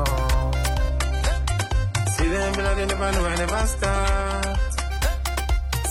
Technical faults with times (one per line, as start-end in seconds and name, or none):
0.90-4.90 adaptive stream at a lower bitrate